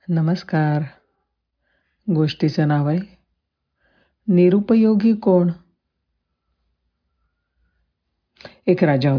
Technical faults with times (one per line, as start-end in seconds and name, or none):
none